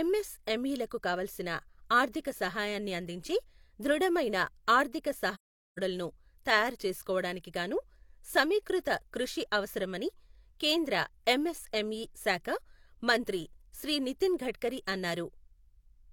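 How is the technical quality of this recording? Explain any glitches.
The recording has one clear glitch, an AAC frame loss with muting, from 5.34 to 5.79 s, just after "సహాయాన్ని అందించే ధృడమైన ఆర్ధిక". The decoder zeroed the missing frames, and the overlapping windows faded the speech out and back in. That leaves a soft-edged silence of about 0.43 s, consistent with roughly ten lost frames. The gradual edges distinguish it from a hard dropout, and the true silence distinguishes it from concealment that repeats sound.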